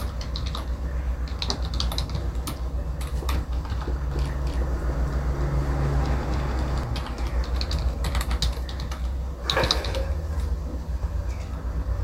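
From 4.11 s to 6.83 s a doubled audio track appears: a second full-band copy trails the original by roughly 300 ms at about the same level, with no decay or room colour, and cuts in and out abruptly, likely from a slower parallel capture path.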